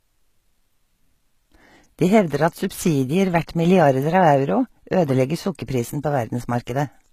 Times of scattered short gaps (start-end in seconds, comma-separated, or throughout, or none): none